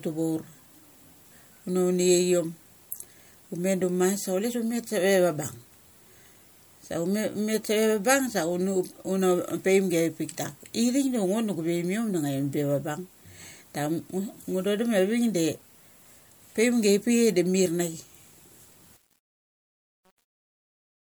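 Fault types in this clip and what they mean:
Truncation distortion on a fade: the closing fade, from about 18.97 s to the end, runs through a level stage that keeps too few bits and adds no dither, which fits roughly an 8-bit path. As the speech drops toward the smallest step, the waveform collapses into a few coarse square steps, so the tail turns gritty instead of fading cleanly. It's at its worst from about 19.1 s right through to the end.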